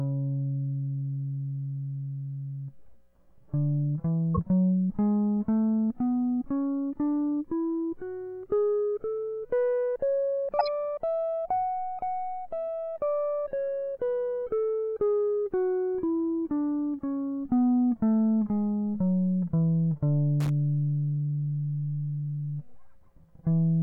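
At 4.35 to 4.39 s, and again from 10.59 to 10.68 s, the music gets hit by a corrupt frame decoded: damaged compressed data played anyway, spraying energy into the wrong frequencies as a short squeaky burst, peaking around -15 dBFS, then a louder one near -10 dBFS spanning a handful of frames. Then from 20.40 to 20.50 s there's loose connector crackle, a contact making and breaking so the signal chops into a scratchy, irregular crackle.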